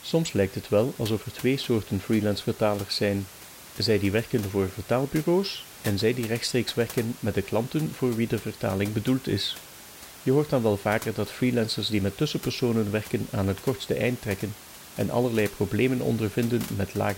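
Nothing in this speech recording points to a technical fault, and the only thing under the talking is the room's own background noise, sitting about 18 dB lower.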